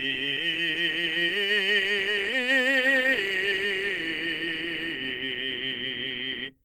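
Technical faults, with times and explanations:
Throughout: Opus compression. The music sounds grainy, rough and plainly hoarse. This is likely Opus in hybrid mode, fitting a low rate near 16 kbps.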